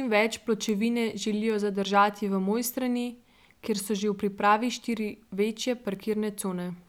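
At 0.69 s, 1.50 s (just before "zadržati v") and 5.95 s (right after "v pripravi štiri večje") the speech carries a bit error spike: a flipped bit throws one or two samples to a value far from the waveform and back, heard as a sharp, unrelated tick. The first peaks near about -15 dBFS, the others about -27 dBFS. On the waveform each is a lone needle; a spectrogram shows a thin vertical line across all frequencies.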